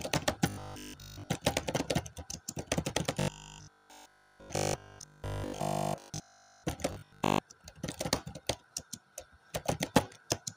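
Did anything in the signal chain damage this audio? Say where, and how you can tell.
Yes. Robotic sound from repeated short buffers appears at 0.50–1.32 s, 3.20–6.66 s and 6.93–7.39 s, likely from driver or buffer underruns. A 20 ms block loops, which forces a rigid 50 Hz buzz, continuously in the middle stretch. The waveform shows identical 20 ms cycles, and the spectrogram shows evenly spaced 50 Hz harmonic stripes.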